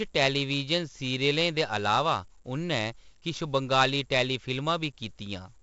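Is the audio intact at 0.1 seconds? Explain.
No. At 0.1 s the speech already carries 4-bit ADPCM compression, which runs through the whole clip. Each sample is coded as a coarse 4-bit step from a predicted value, with the step size adapting as it goes, so the error rides along as a gritty hiss tracking the signal's level and roughening sharp onsets. The damage is heavy, and nothing is heard above 7.8 kHz, which fits a 16 kHz sample rate near 64 kbps.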